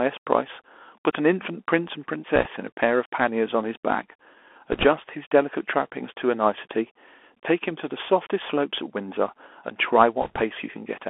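Throughout, the speech sounds thin and boxed-in, held between about 300 Hz and 3.4 kHz, with scratchy s sounds, a grainy hiss underneath and plain distortion on loud bright moments. This is the Bluetooth CVSD headset codec, a one-bit up/down coder whose adaptive step cannot track fast high-frequency swings, which fits a 64 kbps link.

At 2.36 to 2.48 s, 4.72 to 4.86 s and 10.22 to 10.42 s, brief bursts of rushing, crackly noise wash over the speech without any sharp clicks. These are bit errors on a Bluetooth voice link, with around one to two percent of bits flipped. Each CVSD bit moves the signal only a little and the mistakes fade out, so they smear into noise rather than pops.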